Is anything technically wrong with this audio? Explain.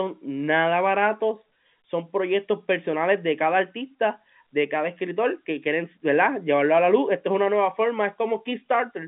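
No technical faults are audible.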